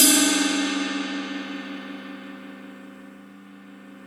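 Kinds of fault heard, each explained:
No technical faults are audible anywhere in this sound.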